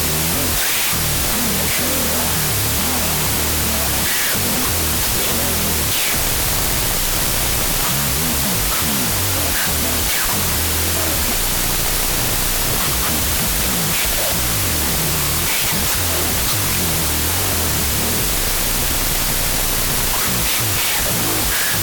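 Audio written as 32-bit float but read as 16-bit integer, a wrong sample width throughout, splits each sample into mismatched halves: loud noise buries the speech, playing at half speed and lower pitch.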